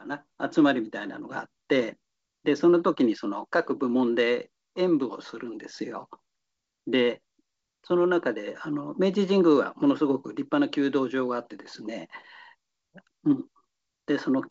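No technical faults can be heard in this speech.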